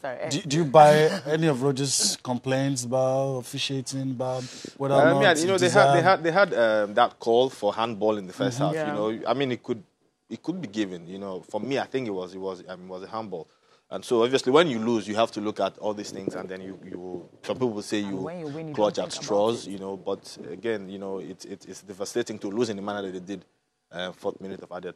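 No technical faults can be heard anywhere in this recording.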